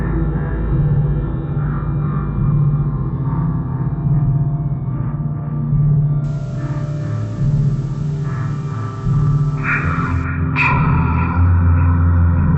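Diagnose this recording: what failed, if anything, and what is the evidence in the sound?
Everything plays at half speed and a full octave low from start to finish: stereo read as mono, where interleaved left and right samples are played one after another as a single channel.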